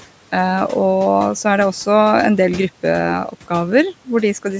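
From 3.28 to 3.51 s the noise suppressor cuts into the speech. It treats a low-level stretch of the speech as background and pulls it down with the noise, by about 11 dB at the deepest point, over around a tenth of a second in total. That passage sounds swallowed and faint against the speech around it. The room noise, about 20 dB below the speech, and the call processing's band limit at 8 kHz are not faults.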